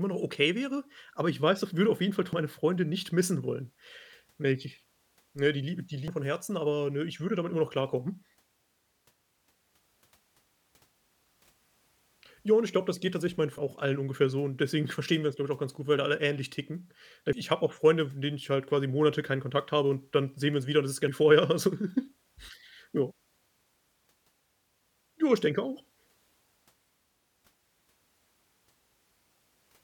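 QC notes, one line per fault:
2.33, 6.08, 13.58, 17.33 and 21.08 s: audio missing between chunks. At each point roughly a third of a second of speech disappears, and the two sides join with no gap, so the speech jumps forward abruptly. The skips are spaced at multiples of 3.75 s, which likely means the recorder loses audio each time it closes one 4-second chunk and opens the next. On the waveform and spectrogram each splice is a sudden discontinuity in envelope and harmonics, with no silent strip.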